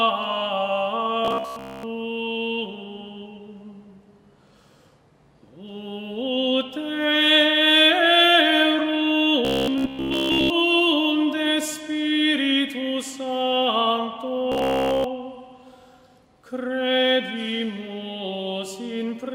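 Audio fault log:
1.25–1.83 s, 9.45–10.51 s, 14.52–15.04 s: robotic sound from repeated short buffers. A rigid metallic buzz at 66.8 Hz, likely from one 15 ms chunk replayed while audio arrives late; most of the first span and all of the others repeat. The spectrogram shows evenly spaced 66.8 Hz harmonic stripes, and the waveform shows identical cycles.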